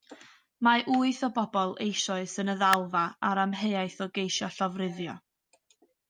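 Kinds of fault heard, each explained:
Electrical switching spike: a brief arc from a nearby switch, motor or static discharge was likely picked up by the audio line, adding a sharp snap or tight cluster of clicks at 2.73 s. It lasts only a few milliseconds, peaks around -10 dBFS and sits on top of the speech.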